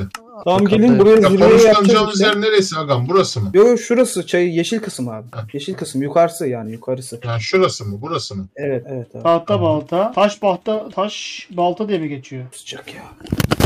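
No technical faults are audible.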